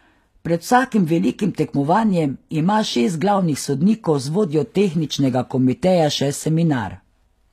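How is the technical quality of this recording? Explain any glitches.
The recording has a plainly audible codec fault throughout. HE-AAC compression is the likely cause: the treble is rebuilt from copied lower bands, consistent with about 24 kbps, so s sounds turn gritty and lispy, with nothing above 14.9 kHz.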